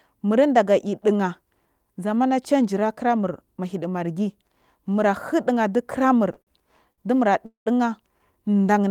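At 6.33, 6.42 and 6.93 s come short stalls from a late packet. The jitter buffer emptied, so the sound is held 26 to 49 ms, with a faint buzz.

From 7.46 to 7.68 s there is a call audio freeze. The sound stretches into a fading buzz, then 120 ms of silence. Packets were likely held up in transit.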